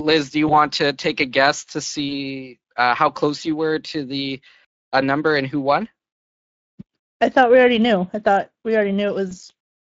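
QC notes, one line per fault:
Throughout, Speex codec damage is plainly audible: the speech has a grainy, hoarse edge, because this CELP coder spends a limited bit budget on the excitation and smears fine pitch detail into noise. Any high band above 8 kHz is a shaped noise-like fill rather than true detail. The degradation points to a middle setting around 20 kbps. Unlike wideband transform codecs, it does not produce watery swirling or pre-echo.
0.47–0.54, 2.09–2.16 and 9.29–9.32: VoIP packet loss concealed by the speech codec. At each point the sound briefly stretches and fades, which fits a single lost 20 ms frame. The decoder repeats its last pitch and filter at falling gain, and because later frames build on that guessed state, the distortion runs on for tens of milliseconds after packets return. There is no abrupt silence or click as with an uncovered dropout.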